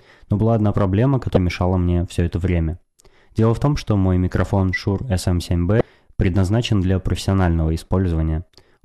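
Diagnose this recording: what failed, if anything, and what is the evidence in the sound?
The failure is at the codec stage: damaged data in a compressed stream. Two brief glitches cut the speech at 1.34–1.37 s, after "но была одна проблема", and at 5.78–5.81 s, before "предназначен для". Corrupt bytes there made the decoder misread frames and resync at the next header.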